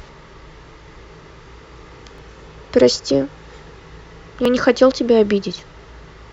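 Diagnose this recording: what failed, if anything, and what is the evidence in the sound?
Regular clicks every 1.13 s in the speech, about five from 1.05 s to 5.59 s: likely clock drift buffer slips, where mismatched device clocks drop or repeat a few dozen samples.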